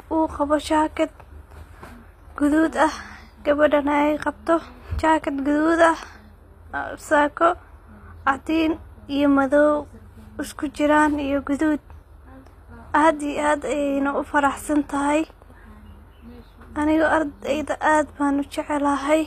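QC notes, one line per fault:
Throughout: HE-AAC compression. The treble sounds bright but synthetic, with s sounds gritty and lispy, metallic sheen in the upper band, and nothing at all above 14.9 kHz. The likely cause is spectral band replication. Only the lower spectrum is coded properly, and the top is rebuilt by copying lower bands upward under a coarse envelope, so the harmonics there no longer line up. The damage is plainly audible and fits a low bitrate near 24 kbps.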